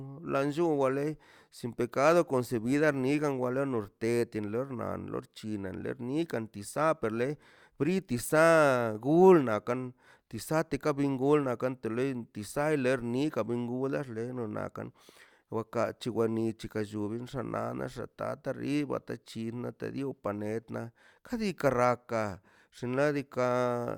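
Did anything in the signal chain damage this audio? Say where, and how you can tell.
No, nothing in this speech recording stood out on listening as damage from any stage of the signal chain.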